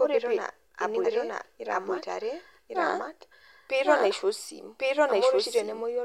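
Throughout the speech, a second full-strength copy trails the original by about one second, landing cleanly with no decay or room colour. This doubled audio track likely comes from the same signal being captured again through a slower path and mixed back in.

At 1.04 s the speech lurches forward past roughly a fifth of a second, marked by a short smeared blip rather than a sharp click. Compressed frames were skipped here. The jump fits several frames of about 26.1 ms missing or rejected as damaged.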